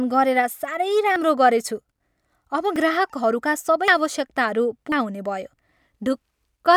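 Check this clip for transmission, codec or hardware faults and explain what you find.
Four skips break up the speech. Dropped buffer (overrun), likely, at 1.16, 2.76, 3.88 and 4.92 s: uncollected audio was overwritten, so about 40 ms (first two) or about 100 ms (last two) vanishes, each heard as a jump forward.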